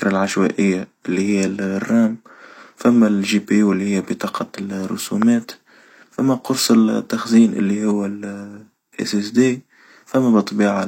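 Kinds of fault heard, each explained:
Loud pop: a single sharp pop at 5.22 to 5.24 s, jumping around 15 dB above the speech. It's a brief voltage spike added to the signal, likely from a plug, switch, static or driver glitch, and the speech carries on underneath it.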